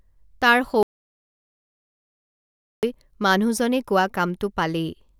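A speech recording with an audio dropout to silence from 0.83 s to 2.83 s: the sound cuts off mid-flow and returns two seconds later, with no room tone in between, so that stretch of speech is lost. The likely cause is the input briefly failing while recording continued, writing silence. On a waveform it shows as a flat line; on a spectrogram, a solid black band with sharp vertical edges.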